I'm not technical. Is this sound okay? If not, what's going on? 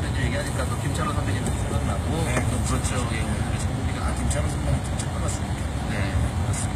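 No. The audio was likely squeezed hard by HE-AAC compression, which stores only the lower sounds and fakes the treble by copying them upward. Throughout, the highs sound gritty and metallic rather than natural, and nothing survives above about 15 kHz.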